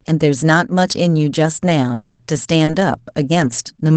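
This is speech coming through a call path whose coding noise and roughly 8 kHz top end fit Opus at around 24 kbps. The first problem runs from 1.93 to 2.20 s. The last bit of sound gets dragged out as a fading buzzy smear for about 240 ms, with no true silence, and when the audio resumes, that same 240 ms of speech is simply gone. That pattern points to a long network dropout as the likely cause: nothing arrived for that stretch, and the receiver papered over the hole by extending what it already had until real packets showed up again.

Right after that, from 2.65 to 2.71 s, a sound is held about 30 ms too long and picks up a slight buzz, then carries on from exactly where it left off with nothing lost. That's a short stall from a late packet. The jitter buffer ran dry, the receiver stretched the last sound, and the packet turned up 30 ms late, nudging the playout delay up by that much.

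There are also three patches, each 60 ms long, that sound rougher and noisier than the surrounding speech, at 2.68 to 2.74 s, 3.40 to 3.46 s and 3.52 to 3.58 s. Those are lost packets rebuilt from error correction. Each missing packet was replaced by the low-bitrate copy carried in the following one, so there's no gap, just a coarser rendering.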